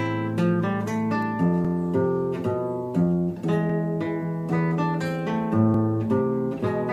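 At 1.65, 3.70 and 5.74 s, overlapping chunks cause a stutter. The audio was handled in 2.0 s chunks, each starting about 48 ms before the previous ended, so that slice plays twice. Unlike dropouts, nothing goes missing, and the evenly spaced repeats set it apart from random glitches.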